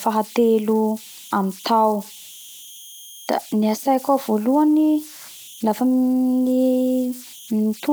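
Converter idle tones run throughout the speech: an undithered delta-sigma converter cycles through repeating bit patterns, leaving a whistle around 3 kHz, about 23 dB below the signal.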